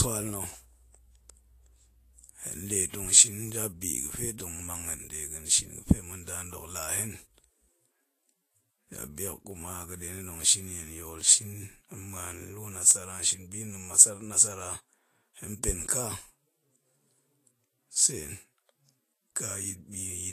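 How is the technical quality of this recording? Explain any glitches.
The recording has two audible faults: constant codec degradation and periodic clicks.

Throughout, likely Vorbis compression at a low bitrate, around 32 kbps, quantises the treble coarsely and removes everything above 14.2 kHz, so the speech sounds hissy and grainy.

From 1.01 to 19.70 s, clock drift buffer slips recur every 1.7 s. A clock mismatch of roughly 200 ppm likely drops or repeats about 15 samples each time, producing around ten clicks.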